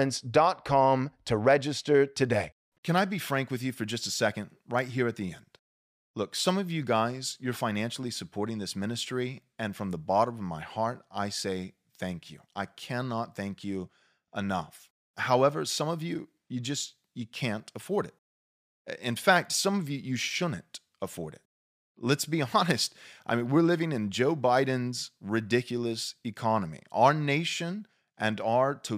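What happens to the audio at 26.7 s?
Nothing goes wrong at 26.7 s; the speech carries on intact through that moment with no audible fault.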